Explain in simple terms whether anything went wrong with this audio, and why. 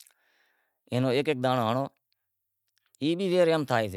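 Nothing went wrong with this speech recording, as no audible fault turns up anywhere in it. Listening closely reveals nothing that needs explaining.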